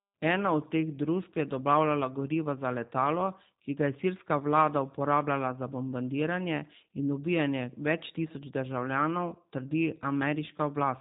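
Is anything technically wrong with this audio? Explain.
Yes, the speech has passed through a low-bitrate voice codec.

G.729 codec, throughout the clip: the encoder doesn't keep the waveform. It keeps a vocal tract filter, a pitch predictor and a sparse set of pulses for each short frame, then the decoder resynthesises speech from those. Nothing above 3.8 kHz survives, so the sound is dull and boxy. The codec damage is plainly audible: a rough, slightly synthetic quality to the speech, consistent with an 8 kbit/s G.729A stream.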